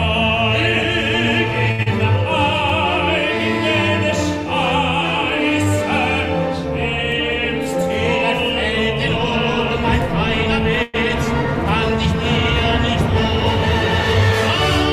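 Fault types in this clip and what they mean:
Short stall from a late packet: from 1.71 to 1.81 s a packet arrived too late and the jitter buffer ran dry, so the receiver held the last sound for about 72 ms, then resumed from the same point. Nothing is lost, but playback now runs 72 ms later.
Short concealed packet loss: right after, from 1.83 to 1.88 s, about 40 ms of audio never reached the decoder. The receiver patched it with 34 ms extrapolated from the preceding sound, then blended back, leaving a brief smear.
Call audio freeze: from 10.83 to 10.96 s the sound is stretched into a held buzz or hiss for about 110 ms without dropping to silence, then carries on where it stopped. This is likely caused by packets held up in transit, pushing playback 110 ms later.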